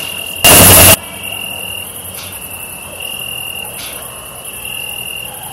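From 0.44 to 0.94 s the audio turns into a blast of harsh distortion where even the quiet bits come out as loud as everything else. That's the sound of signed and unsigned mixed up, likely 16-bit samples read with the wrong sign convention, so every zero crossing jumps right across the whole range.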